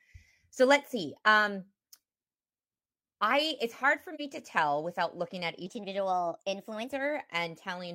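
Speech with two faults. At 4.15 to 4.20 s, AAC frame loss with muting leaves a brief dip of about 43 ms, matching one lost frame whose spectrum the decoder zeroed. The overlapping windows fade the sound out and back in, and a spectrogram shows a narrow full-band gap with tapered edges. From 5.66 to 6.93 s a section plays at the wrong speed, 1.19 times too fast, so the voice is hurried and about three semitones higher, likely from resampling against the wrong clock. A spectrogram shows the harmonics stepping upward and the waveform's cycles compressed for that span.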